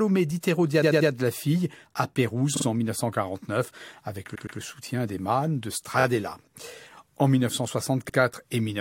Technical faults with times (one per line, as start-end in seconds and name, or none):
0.81-1.09 repeated frames
2.56-2.65 repeated frames
4.34-4.58 repeated frames
5.99-6.04 repeated frames
8.08-8.15 repeated frames